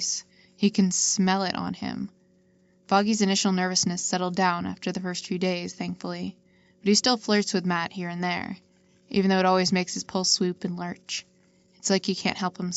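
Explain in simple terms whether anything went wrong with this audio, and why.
Nothing went wrong with this audio. It came through an ordinary call connection, which keeps nothing above about 8 kHz, so the very top end sounds a little dull, as it does on any such call.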